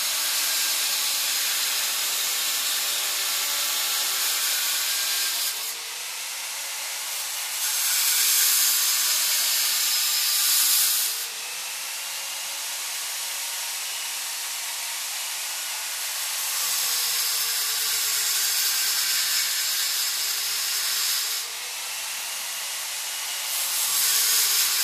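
Everyday sounds play through the whole clip with every event arriving twice: a second, full-band copy trails the first by roughly a fifth of a second, at about the same level as the original, with no decay or room colour to soften it. This doubled audio track most likely comes from the same material being mixed in a second time, either through a slower capture path or through an edit that holds two copies out of step.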